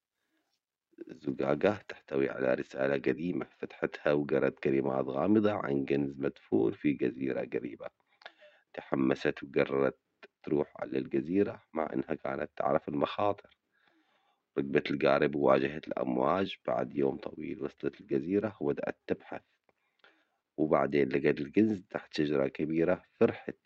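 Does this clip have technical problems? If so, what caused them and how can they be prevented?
Yes. From 2.03 s onward, channel delay causes comb filtering: one channel lags by a couple of samples, roughly 0.05 ms, so mono summing notches around 10 kHz, dulling the top. Prevent it by time-aligning channels before summing to mono.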